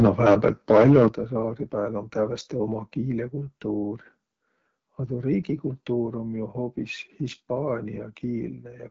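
From 0.00 to 1.07 s the loudest syllables carry a harsh, crackling edge, most likely microphone overload. Peaks run about 6 dB past the converter's limit, so a noticeable share of samples are flattened. The waveform shows squared-off tops, and the spectrogram shows broadband splatter above the harmonics.

At 0.07 s, inside that distorted stretch, both the voice and the background drop suddenly by about 4 dB, likely the microphone volume stepped down by the call software. The waveform envelope shrinks in a single step, and the spectrogram dims evenly across all frequencies at that instant.

Throughout, the speech sounds rough and raspy, the mark of the AMR wideband (HD Voice) codec at a low rate, which fits 8.85 kbit/s. A spectrogram shows nothing above 7.5 kHz, smeared harmonics, and a noise-filled band from 6.4 to 7 kHz.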